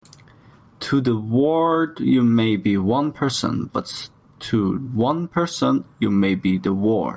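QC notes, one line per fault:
Throughout, gain pumping: the gain swings by about 10 dB as louder speech pulls it down, likely from excessive input gain driving a fast limiter.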